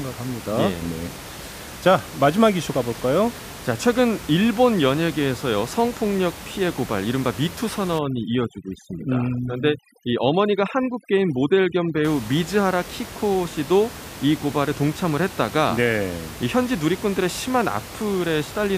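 From 7.99 s to 12.05 s the speech suffers from overdone noise removal. The room noise, sitting about 15 dB below the voice, falls close enough to the suppressor's noise estimate that whole frequency bands are cut away, taking the voice's quieter detail with them. The background drops and breaks up into twinkling fragments. A spectrogram shows a scattered, patchy texture of isolated bins between harmonics, and the waveform's noise floor drops.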